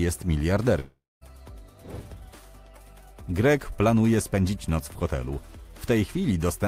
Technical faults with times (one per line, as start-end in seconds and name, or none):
0.79-1.23 long network dropout